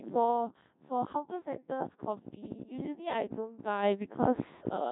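Throughout, the speech carries a Codec 2 vocoder sound: heavy buzzy, robotic resynthesis from pitch and envelope alone, which fits a 1.6 kbit/s mode, unlike the smeared warble of ordinary low-bitrate codecs. At 3.84 s the microphone volume is stepped up by about 9 dB in one jump, lifting voice and background together instead of ramping gradually.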